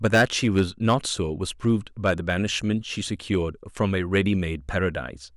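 Hard clipping from 0.05 to 1.09 s, about 10 dB over, cuts peaks flat into harsh fuzz; briefer crackles follow at 1.68–1.70, 2.06–2.33 and 4.15–4.27 s.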